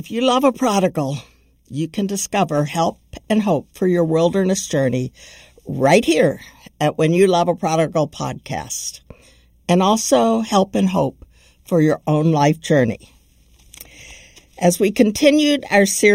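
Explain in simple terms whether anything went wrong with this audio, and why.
Something did go wrong, and it lasts the whole clip. The speech sounds hollow and a little phasey, as if heard through a tube. This is channel delay, which causes comb filtering. One side of the recording arrives late by about a third of a millisecond. When both sides are mixed into one, parts of the sound cancel out at evenly spaced pitches. The first gap sits around 1.5 kHz, and that makes the voice sound hollow.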